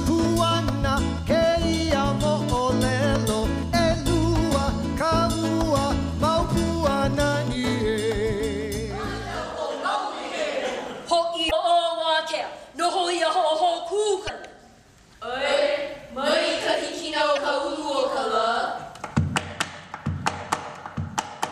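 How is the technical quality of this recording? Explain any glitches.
The recording has three short glitches, all from damaged data in a compressed stream, at 11.48–11.53 s, 14.25–14.30 s and 17.33–17.38 s. Corrupted bytes make the decoder misread those frames and lose sync, so each spot comes out as a brief chirp or blip of about 40 ms.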